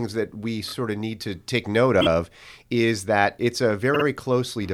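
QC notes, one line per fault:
0.67–0.73 s, repeated frames: Just after "that we", a block of about 26 ms plays three times in a row before "of need to take". This is a short stutter. It fits one compressed frame being sent again.
2.00–2.07 s, repeated frames: After "need to take note", a 26 ms block stutters twice more. It adds about 52 ms.
3.93–4.04 s, repeated frames: After "is that it's", a longer 52 ms block loops twice. That points to two frames repeating together. It adds about 105 ms.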